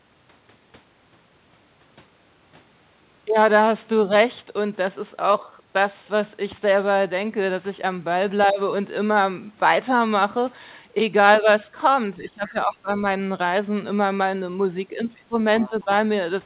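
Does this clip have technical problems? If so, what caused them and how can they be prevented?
Yes. The speech dips in three places: from 12.16 to 12.9 s, falling by roughly 15 dB; from 15.23 to 15.37 s, by about 20 dB; and from 15.69 to 15.89 s, by about 10 dB. This is speech suppressed in double talk. The likely cause is the echo canceller, which could not tell the near talker from loudspeaker echo while both sides spoke, so it attenuated everything. Better double-talk detection, or a headset that removes the loudspeaker echo, prevents this.

Faint scraps of a second voice also come through: from 12.47 to 12.51 s at about 25 dB below the speech, from 15.16 to 15.21 s at about 35 dB below, and from 15.6 to 15.83 s at about 20 dB below. This is the other side's voice leaking through, likely residual loudspeaker echo that the canceller failed to subtract from the microphone. Headphones, or a canceller with longer adaptation and stronger residual suppression, stops this leakage.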